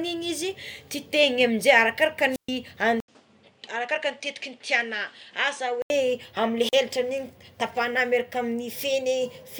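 A speech recording with two wireless microphone squelch dropouts and a stretch where the sound changes character. At 2.30 to 2.50 s and again at 6.59 to 6.80 s, hiss swells briefly before the output falls into a hole of near silence, about 126 ms long the first time and about 41 ms the second. That rising static ahead of the gap is the mark of an analogue FM link fading until the receiver's squelch mutes it. A digital packet loss would instead cut cleanly or smear without any noise build-up. From 3.00 to 5.90 s the audio goes duller and boxier, with nothing above 10.1 kHz. It drops about 5 dB in level and carries a new background noise sitting well below the speech. It is entered through an 80 ms silence. This most likely comes from the input being switched to a poorer device for that stretch. Unlike a lowpass filter applied in processing, the change arrives all at once with its own level, noise floor and tone, and it reverses abruptly at 5.90 s.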